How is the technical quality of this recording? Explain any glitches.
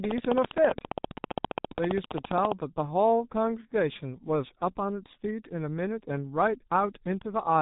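Technical quality is poor, with heavy G.723.1 codec damage throughout. The coder rebuilds speech from a slowly updated 30 ms model, which fits a roughly 6.3 kbit/s stream, and passes nothing above 3.8 kHz, so the audio sounds muffled and hoarse, with blurred consonants.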